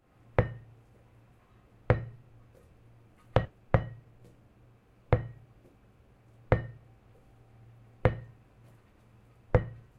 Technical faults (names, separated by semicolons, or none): skip ahead; jitter buffer speed-up